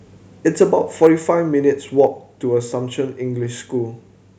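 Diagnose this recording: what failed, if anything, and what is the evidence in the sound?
Microphone overload is heard as harsh, crackling tops on the loudest speech peaks at 0.61–0.63 s, 1.02–1.07 s and 1.99–2.05 s, about 2 to 3 dB beyond full scale. The likely cause is input gain set too high at the converter stage, so the waveform peaks are flattened.

The microphone volume is stepped down abruptly at 1.07 s, by about 3 dB, and again at 2.07 s, by about 2 dB. Each step follows a distorted peak. This likely comes from call processing lowering the device's input gain in one step after detecting clipping.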